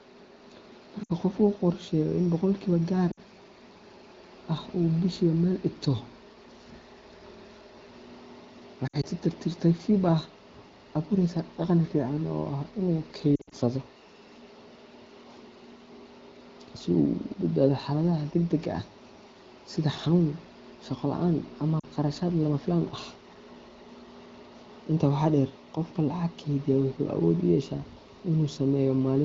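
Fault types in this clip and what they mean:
Lost AMR speech frames: damaged frames are concealed by repeating the last good pitch and vocal tract settings at falling gain. This is heard as short warbles or dips of 40 to 120 ms at 1.03, 3.11, 8.87, 13.36 and 21.79 s.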